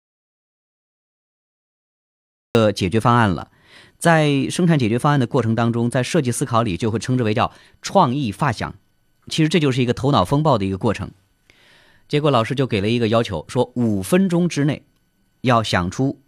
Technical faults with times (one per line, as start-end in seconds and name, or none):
0.00-2.55 audio dropout to silence